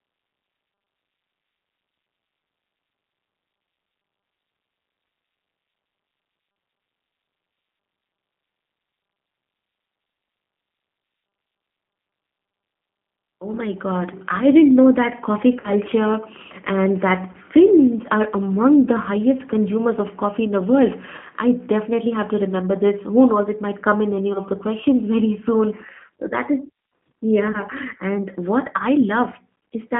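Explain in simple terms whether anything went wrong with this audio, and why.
The speech went through the G.729 codec, a low-rate phone codec that rebuilds the voice from a rough model and drops everything above 3.4 kHz, so it sounds muffled, rough and slightly synthetic throughout.

VoIP packet loss concealed by the speech codec occurs at 15.6 s after "didn't know that coffee", and at 17.3, 21.2, 24.3 and 27.5 s. Pieces of audio went missing, and the decoder guessed by stretching what came before, leaving brief buzzy, fading blips. Around 21.2 s the gap falls between "coffee in the world" and "I definitely have to", and around 24.3 s between "might come in any" and "the questions".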